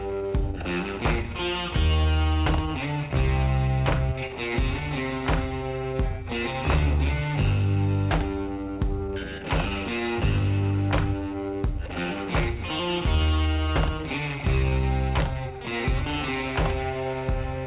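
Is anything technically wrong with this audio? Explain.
No, nothing technically wrong with this audio.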